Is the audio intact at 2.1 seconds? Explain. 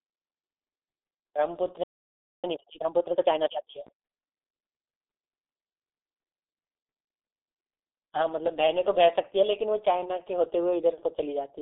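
No. At 2.1 s the audio is inside a playback stall that runs from 1.83 s to 2.44 s, a gap of about 0.6 s. The sound stops in mid-flow and goes silent, most likely because the player ran short of data or its output thread was briefly blocked. Unlike a dropout from packet loss, where audio is skipped and the flow jumps ahead, this gap is a single clean pause of silence rather than a chopped or garbled stretch.

The moment also carries the G.723.1 codec damage heard throughout the clip. This low-rate telephony codec runs at 6.3 kbit/s and keeps only a narrow band, roughly 250 Hz to 3.6 kHz, with nothing above 4 kHz. That makes the speech sound muffled and hoarse, with smeared consonants. It differs from a simple low-pass filter because the coarse 30 ms frame-by-frame voice model adds a rough, buzzy texture, not just a loss of treble.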